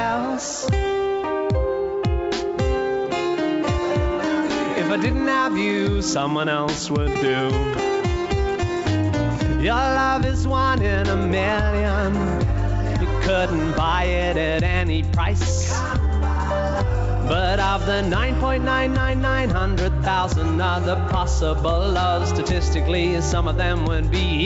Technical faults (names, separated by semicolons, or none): none